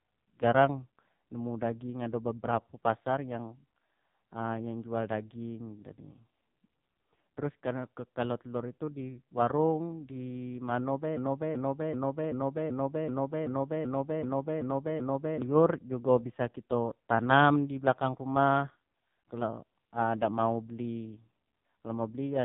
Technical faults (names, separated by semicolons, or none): AMR narrowband mobile codec; broken-record loop